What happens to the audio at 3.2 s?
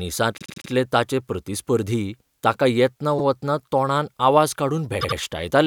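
At 3.18 to 3.23 s, just after "ताचें प्रतिस्पर्धी ताका येतना", repeated frames play a 52.2 ms block of speech twice, which fits a pair of compressed frames being sent again. It sounds like a brief stutter before "वतना तोंडान" and adds 52.2 ms. On a spectrogram or waveform, the same slice appears twice, back to back.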